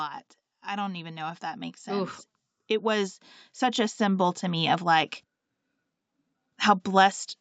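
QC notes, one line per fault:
0.65–2.2 s and 2.81–5.18 s, automatic gain rising: the gain control judges the input too quiet and ramps it up, by about 5 dB and then about 7 dB, so speech and background noise swell together. The waveform envelope and the spectrogram's noise floor both climb steadily across each span.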